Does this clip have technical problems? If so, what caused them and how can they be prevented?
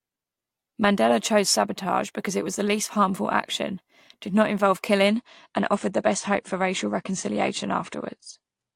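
Yes. From 5.08 s to the end, after "action did not involve", the adaptive stream switches to a lower bitrate. Treble vanishes above 9.8 kHz, which fits a drop from about 96 to 32 kbit/s. Larger playback buffers or a higher minimum bitrate would prevent it.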